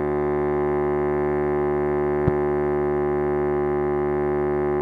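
At 2.28 to 2.30 s a single sharp loud pop cuts through the music, standing well above it for a few hundredths of a second while the music carries on underneath. It is likely a brief voltage spike, from a plug, switch, static discharge or driver glitch, added to the signal and shaped by the circuits after it.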